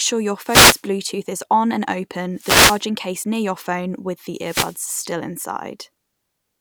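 Short bursts of hissing static swish over the speech three times: from 0.44 to 0.83 s, from 2.35 to 2.85 s, and from 4.38 to 4.83 s, each lasting about half a second or less. These are wireless microphone noise hits. The analogue FM radio link from the microphone fades as reflected signals cancel the direct one, so the receiver's own noise surges up until the signal recovers.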